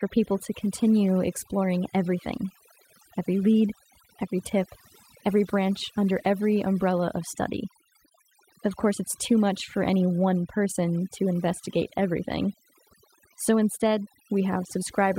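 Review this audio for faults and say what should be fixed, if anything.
Overdone noise removal, throughout the clip: the noise reduction was pushed far too hard, so any frequency band sitting near the tool's noise estimate gets pulled down or switched off entirely. Between phrases the background drops, broken by twinkling specks where isolated bands flicker back on, and quieter components of the speech fall under the same threshold and are stripped away. To prevent it, apply noise reduction gently, setting the reduction amount and threshold conservatively and checking the result by ear on the quietest passages.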